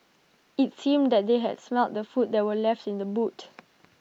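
No technical faults can be heard anywhere in the speech. Nothing in the recording needs a timestamp or a fault description.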